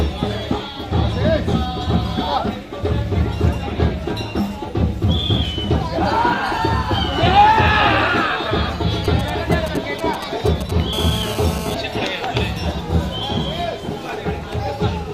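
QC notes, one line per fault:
9.05 to 10.94 s, GSM signalling bursts: a galloping dit-dit-dit of short buzzes at roughly 10 dB below the sound. A nearby 2G phone is sending brief groups of radio bursts at 217 Hz, and the audio circuit rectifies them into clicks. On a spectrogram this shows as short, repeated vertical stacks of harmonics on a 217 Hz spacing with gaps between them. The waveform shows clustered spiky pulses.
10.94 to 11.75 s, GSM phone buzz: the bursts turn into a continuous hard, raspy 217 Hz buzz about 9 dB below the sound, unrelated to it. The phone has moved into a call and now transmits bursts 217 times a second, so the rectified pulses form a steady tone rich in harmonics. A spectrogram shows unbroken horizontal lines at 217 Hz and its multiples. The waveform carries a regular pulse train riding on the signal.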